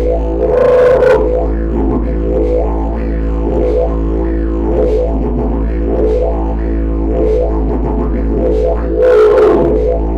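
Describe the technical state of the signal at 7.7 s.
At 7.7 s the signal is in a stretch of hard clipping running from 7.19 to 7.75 s. The level is pushed about 1 dB past what the stage can pass, so only the highest peaks are cut flat. That slight overload gives a brief crackle on the peaks rather than a continuous fuzz. On the waveform the peaks show as short flat plateaus. On a spectrogram, faint harmonic energy appears high above the sound's own content.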